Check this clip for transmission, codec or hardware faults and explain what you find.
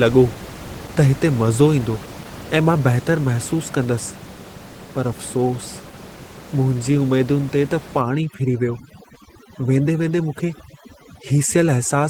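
Two faults are audible: low-rate Opus voice compression across the whole clip, and overdone noise removal in the final four seconds.

The Opus voice compression runs from start to finish. The codec appears to be in hybrid mode: a linear-prediction layer carries the lower band and a transform layer adds the top, so the band stays full width. The excitation is coded coarsely, though, which fits a rate of around 16 kbps in 20 ms frames. The speech comes out hoarse, slightly buzzy and a little robotic. Bandwidth limiting or narrowband telephony would instead sound dull and boxy, with the top simply missing. Here the highs are present.

Overdone noise removal sets in at 8.01 s and lasts until the clip ends at 12.10 s. Up to 8.01 s the room noise sits about 16 dB below the speech. From that point a suppressor set too strong starts switching individual frequency bands down wherever they resemble its noise estimate, and the quieter parts of the voice go with them. 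The background drops and breaks up into twinkling specks. Codec artefacts stay constant through the clip, while this damage appears only from 8.01 s and tracks the noise level.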